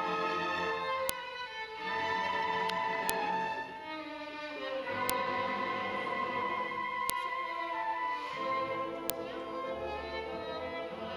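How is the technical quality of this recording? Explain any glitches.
The recording is marred by a regular series of sharp clicks. File header played as audio, at 1.09, 3.10, 5.10, 7.10 and 9.10 s: the audio was joined from 2-second pieces whose header bytes were left in, so each junction plays those bytes as a brief, loud snap regardless of the surrounding sound.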